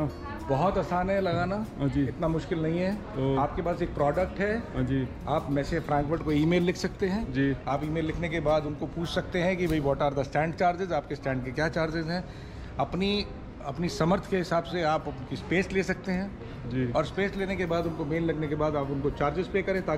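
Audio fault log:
Nothing stood out on listening.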